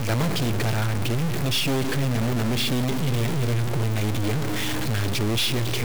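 A stuck bit is the likely cause: one data bit is held at a fixed value throughout, its weight around -20 dBFS. Roughly half the samples shift by that step, so the speech carries harsh, buzzy distortion and the pauses fill with noise.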